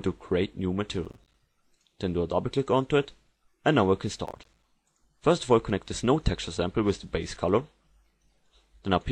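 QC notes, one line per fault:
1.05–1.40 s and 4.26–4.63 s, processor overload crackle: the processor misses buffer deadlines many times in a row, and each missed buffer becomes a brief hard-edged silence. Gaps of around 5 ms each make a gritty crackle riding on the sound, which stops when the overload ends.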